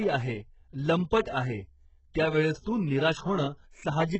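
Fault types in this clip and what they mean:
HE-AAC compression: Likely a very low-bitrate HE-AAC encode (around 8 kbps) that rebuilds treble from copied lower bands; the speech is heavily damaged, with nothing above 8 kHz.
pre-echo: Codec noise spread across a transform block fills the quiet before sharp attacks, giving about 45 ms of hiss at 1.22 s, just before "आहे त्यावेळेस तू", and at 2.62 s.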